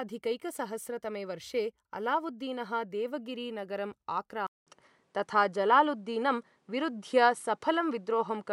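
At 4.47 s, just after "वर्षे अलावुद्दीनः देवगिरि नगरम्", a 200 ms gap leads into duller sound with nothing above 11.4 kHz, a level shift of a few decibels and a faint new noise floor. The input was likely switched to a poorer device. A plain filter wouldn't change tone, level and noise all at once.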